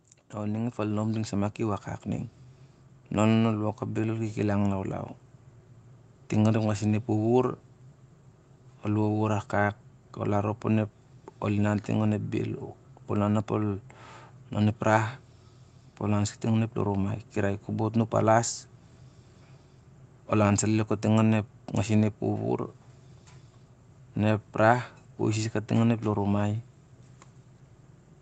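From 0.32 s to 5.12 s, the automatic gain control judged the incoming level too low and kept raising its gain, climbing by about 8 dB over nearly five seconds. Because the boost applies to the whole signal, the speech and the background noise swell together, so the recording seems to drift closer and grow louder rather than jump. The call path's limit of nothing above 8 kHz stays constant throughout the rise.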